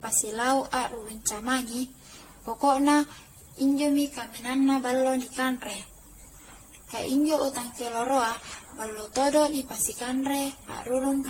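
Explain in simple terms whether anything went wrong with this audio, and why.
Yes. From start to finish the speech sounds swirly, hollow and smeared, with blurred word onsets and no sound above 16.6 kHz. This is generation loss, likely from the audio being compressed and re-saved many times, each pass adding fresh damage.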